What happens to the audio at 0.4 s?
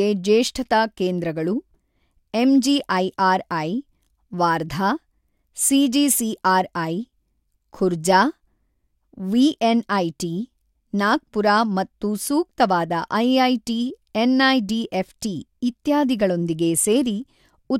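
Nothing goes wrong at 0.4 s; the speech there plays through intact, with no dropout, click, distortion or other fault.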